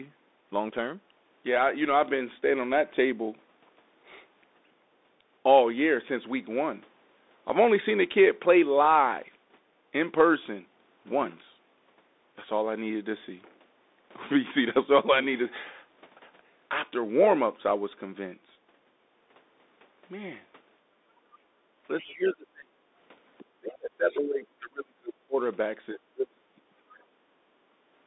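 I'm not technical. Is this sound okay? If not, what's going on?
No, there are a few problems. The whole clip went through a Bluetooth headset using the CVSD codec, the basic narrowband one. Nothing above about 3.8 kHz survives, so the speech sounds thin and muffled, s sounds come out scratchy, and there's a grainy hiss underneath.

Around 20.84 to 21.05 s and again at 21.47 to 21.74 s, the room sound briefly sinks and comes back. That's the background gated by the echo canceller: it heard the other side through the loudspeaker and turned the microphone down for a moment.

From 22.02 to 22.8 s, 23.4 to 25.37 s and 25.93 to 27.3 s, the talker's voice drops away sharply, almost to nothing in places, for several seconds in total. This is likely speech suppressed in double talk: both sides spoke at once, and the echo canceller muted this talker along with the echo.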